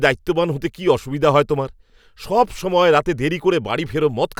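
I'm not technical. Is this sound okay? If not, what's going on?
Yes, nothing wrong is audible in this speech recording, so there is nothing to fix.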